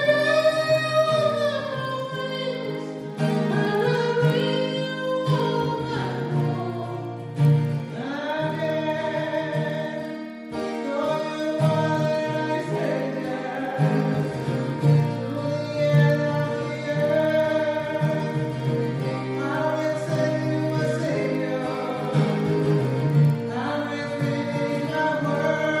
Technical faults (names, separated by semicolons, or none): resampler restarted on every block